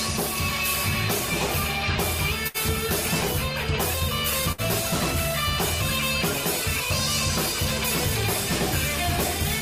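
At 2.47 s and again at 4.52 s, a burst of packet loss leaves roughly 60 ms missing, with the last sound held and fading through each gap rather than clicking or dropping cleanly to silence.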